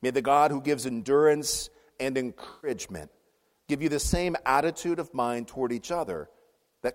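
Between 2.50 and 2.71 s the audio turns smeared and noisy: AAC frame loss with concealment. Around 128 ms of coded data went missing, which fits about six AAC frames, and the decoder filled the hole by re-using the last good spectrum with scrambled signs or interpolated energy. What separates it from a plain dropout is that the gap never falls to silence or clicks; it stays filled with a blurred, phasey continuation of the preceding sound before normal decoding resumes.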